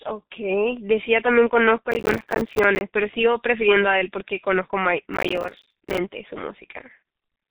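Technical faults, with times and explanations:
Throughout, G.723.1 codec: the speech is squeezed to a bitrate consistent with about 6.3 kbit/s and nothing above 3.8 kHz survives. So it's muffled and hoarse, consonants smear, and the coarse frame-by-frame voice modelling leaves that heavy, grainy codec texture everywhere.
1.92–2.81 s and 5.14–5.98 s, processor overload crackle: in both stretches the processor falls behind and dozens of tiny buffers come out as silence instead of sound. It sounds like buffers of around 5 ms, so the rapid hard-edged dropouts pile up into a gritty, tearing crackle that stops once the load clears.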